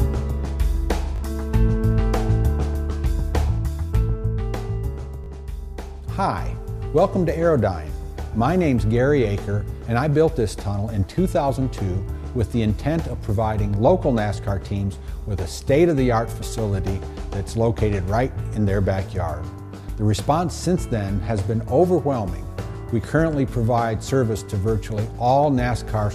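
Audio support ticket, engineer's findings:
Repeated buffer, twice: 1.16–1.20 s and 5.24–5.28 s. Short stutter, the same 20 ms slice sounding three times with hard joins, no audio lost. Playback side: next buffer arrived late, device replayed the last one.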